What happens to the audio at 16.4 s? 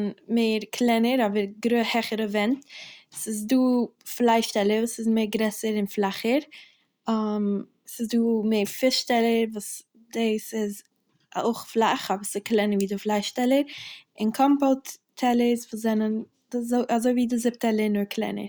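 Nothing goes wrong at 16.4 s; the speech is intact at that point, with no dropout, click or distortion.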